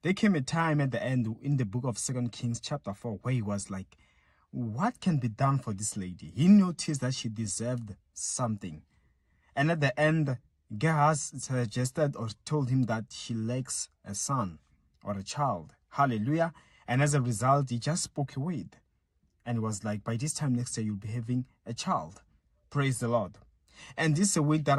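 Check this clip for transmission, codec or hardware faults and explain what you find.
No transmission, codec or hardware faults are audible anywhere in the clip.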